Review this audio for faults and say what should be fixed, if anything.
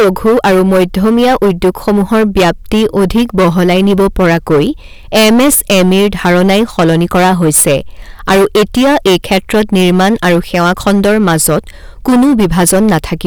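Hard clipping runs through the whole speech clip. The level hits the stage about 18 dB too hot, so roughly a fifth of the samples are cut flat. Those squared peaks add high harmonics, heard as harsh fuzz on every loud syllable. To prevent it, set input gain so peaks stay below full scale with headroom.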